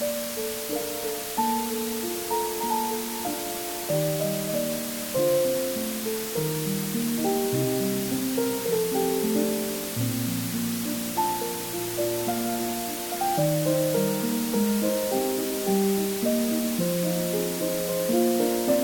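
From the first moment to the last, the whole clip carries low bit depth with dither. The audio was reduced to about 4 bits, with a little random noise added before rounding so the coarse steps don't turn into gritty distortion. Instead, all that error spreads out as a flat, steady hiss, and at 4 bits it's heavy, sitting only a few decibels below the sound itself, so the hiss nearly matches it in level.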